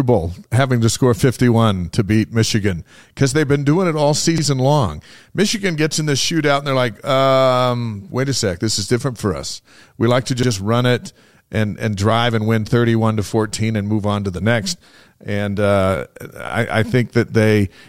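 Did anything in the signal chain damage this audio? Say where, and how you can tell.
Yes. Overlapping chunks at 4.38–4.43 s and again at 10.43–10.48 s. At each point, about 48 ms of the speech plays twice, heard as a brief stutter. The two events are about 6 s apart, which points to a buffer or block-processing stage handling the audio in 6-second chunks. Each new chunk begins roughly 48 ms before the previous one ended, so the overlap is replayed at every join.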